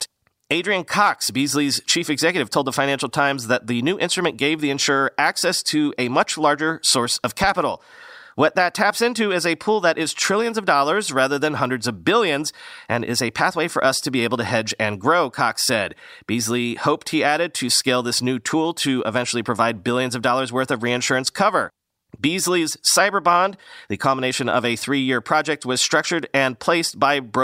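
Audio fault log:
7.44–7.47 s, loud pop: a sudden voltage step or pulse, likely from a plug, switch, static discharge or driver glitch, enters the signal path just after "much larger source of", producing a single sharp pop around 10 dB above the speech, which continues underneath.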